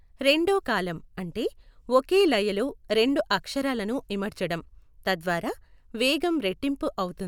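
No technical faults are audible.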